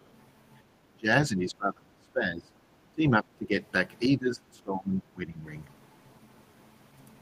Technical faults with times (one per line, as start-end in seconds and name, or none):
0.03-0.07 other side's voice leaking through
0.93-2.53 speech suppressed in double talk
2.92-3.58 speech suppressed in double talk
4.07-5.45 speech suppressed in double talk